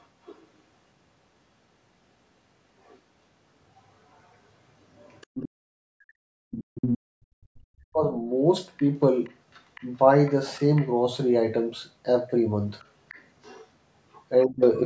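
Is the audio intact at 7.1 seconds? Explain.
No. At 7.1 s the speech is suppressed in double talk (5.57 to 8.13 s), likely because the echo canceller confused the talker with loudspeaker echo. The voice sinks by around 40 dB. Separately, the background is gated by the echo canceller from 7.06 to 7.54 s. The room sound itself drops by about 40 dB, then snaps back as the canceller releases.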